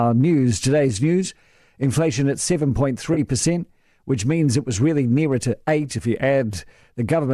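At 3.14 to 3.19 s there is AAC frame loss with concealment. About 30 ms of audio goes missing, which fits three short frames of a likely low-delay AAC stream. The decoder patches the gap from the last good spectrum, leaving a brief smeared, noisy and phasey blur in the speech.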